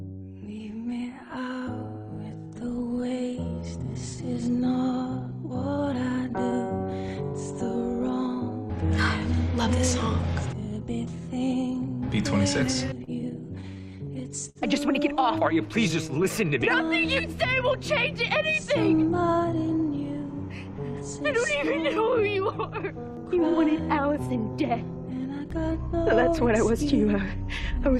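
From 12.73 to 14.58 s there's a patch of scattered short gaps: about seven lost or late packets, each patched by stretching the last bit of sound, around 150 ms in all, none longer than about 50 ms. You hear small ticks and smeared hiccups.

Then from 18.87 to 20.24 s comes a jitter buffer speed-up. The buffer had piled up extra audio, so the receiver trimmed short pitch-period slices, roughly 100 ms total, to catch up. The audio runs about 6% fast at unchanged pitch and feels slightly rushed.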